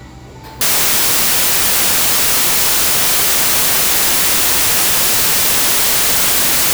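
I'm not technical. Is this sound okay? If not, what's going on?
No. From 0.61 s to the end, the samples are built from the wrong bytes: the player misreads how the data fits together, so the sound becomes loud hiss.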